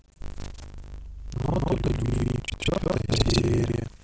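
Buffer tearing throughout: a 25 Hz robotic rattle, heard only with speech, as roughly half of each buffer replays audio about 150 ms old, rather than silent dropouts.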